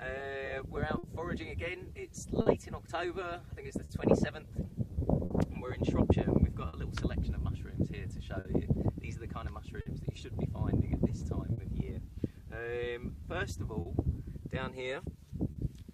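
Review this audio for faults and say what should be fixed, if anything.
Clock drift between sender and receiver runs through the whole recording. The sending clock is a few percent slower than the receiver's, so the jitter buffer keeps draining and the receiver has to make up the shortfall. Because of this, the audio never settles into a steady pace. Small timing hiccups recur at uneven intervals instead of sitting at one spot. Locking both ends to a common clock or adding adaptive resampling at the receiver would prevent it.

Repeated timing corrections run from 0.22 to 15.18 s. Because the sender is slow, the receiver keeps repeating short pieces of audio, always in the same direction, and these add up to roughly a tenth of a second over the stretch. The effect is a slight unsteadiness in tempo, playing at about 99% speed. Smooth resampling rather than piece-by-piece repetition would prevent these audible edits.

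Scattered short gaps appear between 0.98 and 11.6 s. About seven small holes, the longest around 50 ms, were patched by continuing the preceding sound, so nothing is actually lost. They do leave brief smears or ticks across a few percent of that span, spaced irregularly rather than in a run. A slightly deeper jitter buffer, or forward error correction on the link, would prevent them.

A short stall from a late packet is heard at 13.81 to 13.88 s and again at 15.51 to 15.58 s. Each time, a packet arrived 50 ms behind schedule and the buffer ran dry. The receiver held the last sound for 50 ms, then resumed from the same point, so a moment is stretched with a slight buzz or dip. A jitter buffer that adapts quickly to a 50 ms delay step would prevent these stalls.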